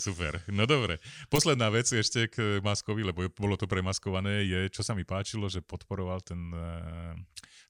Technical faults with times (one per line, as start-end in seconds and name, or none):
none